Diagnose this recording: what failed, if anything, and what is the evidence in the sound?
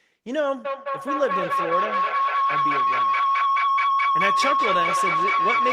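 Feedback howl, an acoustic loop at playback: from 0.65 s the room path gains on each pass, so a tone near 1 kHz swells to about 3 dB over speech, with the loop repeating roughly every 200 ms. On a spectrogram it shows as one bright horizontal line.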